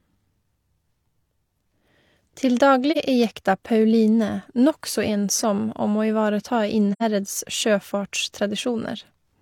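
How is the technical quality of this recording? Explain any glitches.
The recording has two brief dropouts in the speech. Both come from AAC frame loss with muting. At 2.91 to 2.97 s the gap fits one missing frame, about 43 ms. At 6.93 to 7.03 s, right after "om å ivareta", it fits two consecutive frames, about 85 ms. In each case the decoder received no data and filled the missing frames with silence. The overlapping transform windows fade the sound down into the gap and back up afterwards, so the first dropout is a brief dip and the second a soft-edged hole.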